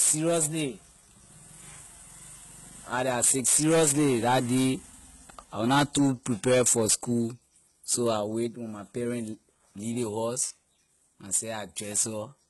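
Speech throughout has gritty, metallic s sounds and treble rebuilt from lower bands with nothing above 11.8 kHz, likely HE-AAC compression at a very low bitrate around 16 kbps; unlike a plain low-pass, the treble stays bright but synthetic.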